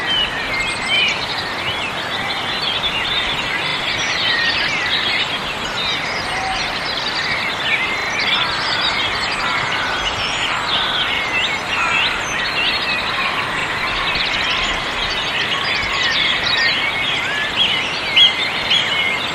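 Repeated buffer stutters occur at 0.96, 3.68, 8.0, 11.16 and 13.6 s in this recording of sounds. At each point a short slice of audio plays again straight after itself, with a hard join at every repeat. It repeats once at 0.96, 11.16 and 13.6 s and twice at 3.68 and 8.0 s. Each repeated piece lasts 40 ms, which fits a 40 ms playback buffer being replayed when fresh audio arrived late. Afterwards the sound resumes with essentially nothing missing.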